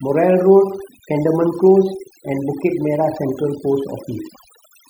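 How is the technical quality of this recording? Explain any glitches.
Quality suffers from overdone noise removal throughout the speech. A noise reducer set too aggressively mutes frequency bands near its noise estimate, leaving near-silent, twinkling pauses and stripping away quiet parts of the voice.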